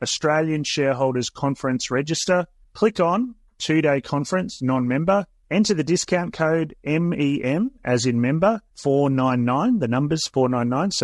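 Speech recorded through a low-delay codec, with audible coding damage throughout. The texture is rough and grainy, with noise filling the gaps between pitch harmonics and a thin, somewhat synthetic top band. That character fits low-delay AAC compression, likely AAC-ELD at a low rate around 32 kbps. Its short frames of roughly 20 ms use a low-delay window, and at this low rate the encoder runs short of bits. At 4.53 s, just after "click on two day", an AAC frame loss with concealment produces a smeared, noisy patch lasting until 4.62 s. The decoder bridges the gap by reusing and perturbing the last good spectrum rather than playing true signal. The roughly 90 ms span fits the loss of a few consecutive short frames, too brief to fade to silence.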